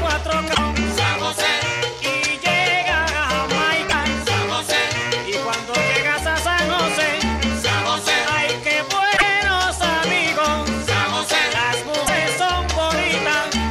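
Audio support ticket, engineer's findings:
Damaged data in compressed stream: short glitches at 0.51–0.59, 3.85–3.94, 9.13–9.23 and 12.03–12.10 s. Decoder misreads corrupt frames, loses sync, resumes at next frame header.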